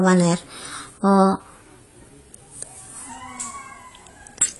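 Speech, with the opening section running at the wrong speed from 0.0 to 3.09 s. It plays 1.13 times too fast, so pitch rises about two semitones and delivery sounds hurried, likely from that portion being played against the wrong clock. Throughout, there is no content above 11.5 kHz, and the remaining band sounds dull and smeared with a warbling, fizzy texture on sustained sounds and sibilants. This is plainly audible AAC compression, likely AAC-LC at a low rate that fits about 32 kbps.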